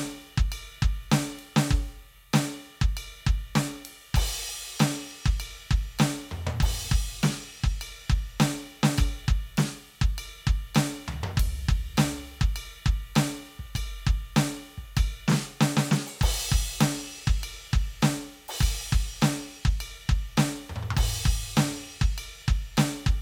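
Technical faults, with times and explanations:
No technical faults detected in this music clip.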